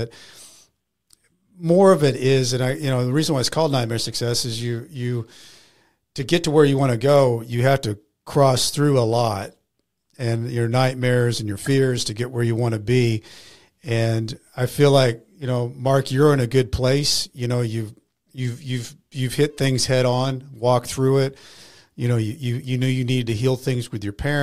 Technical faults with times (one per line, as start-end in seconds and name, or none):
none